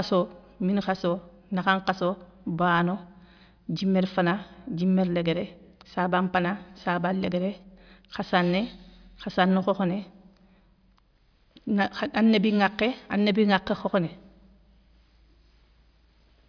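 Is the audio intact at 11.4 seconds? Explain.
Yes, the speech at 11.4 seconds plays through cleanly, with no dropout, click, distortion or other fault at that moment.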